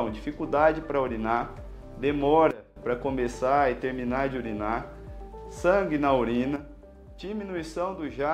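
Sudden gain jumps at 2.51–2.76 s (down about 18 dB) and from 6.56 s to the end (down about 6 dB): level and background noise drop together, likely from gain applied without a ramp.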